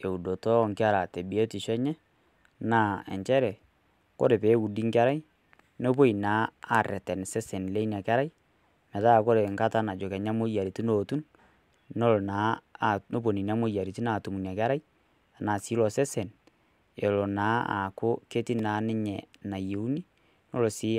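At 18.59 s the output buffer was not filled in time, or a calculation produced invalid values, and a short run of samples was written as zeros. The result is a block of digital silence lasting 0.67 ms, which fits a 32-sample block. Because the signal drops straight to zero and returns with no fade, both edges are abrupt, and at this length the hole itself is too brief to register. It comes through as a single sharp tick in the speech.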